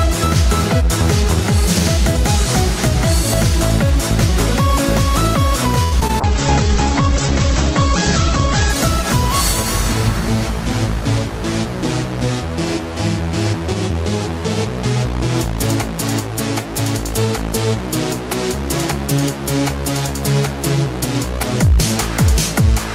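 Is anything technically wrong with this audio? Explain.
Yes, three faults are audible.

From 5.83 to 6.22 s there is repeated packet loss with a robotic sound. Four gaps, the longest 85 ms, are each filled by extending the preceding sound, so about a third of the span is concealed. It sounds choppy and robotic. On the spectrogram, harmonics smear flat across the gaps.

A call bitrate drop runs from 6.19 to 11.52 s. The sound suggests the encoder fell from around 96 kbps to about 10 kbps and stayed at its lowest for 2.24 s. Coarser coding turns the audio rough and watery, and the spectrogram shows content above 8 kHz vanishing where it previously reached 20 kHz.

A jitter buffer speed-up occurs between 13.21 and 13.95 s. To shed excess buffered delay, the receiver cut short pitch-period slices, around 70 ms in total, so playback runs at 108% speed without a pitch change. The audio sounds hurried, and the waveform shows whole periodic cycles removed.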